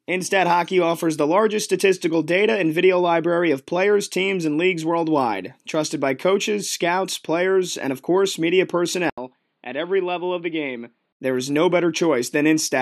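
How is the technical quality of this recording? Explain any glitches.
The recording has one clear glitch. From 9.10 to 11.20 s, right after "and of course media", an 80 ms silence is followed by speech that turns dull and boxy, with nothing above 5 kHz, a level about 5 dB lower and a new noise floor about 45 dB down. The likely cause is the input switching to a poorer device. Because the gap, tone, level and noise all change at once, this is more than a simple filter or codec bandwidth drop.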